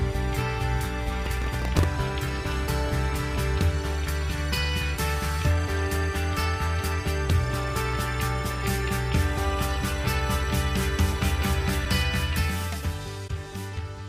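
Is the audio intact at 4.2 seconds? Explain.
Yes, the audio at 4.2 seconds is intact, with no fault heard at that moment.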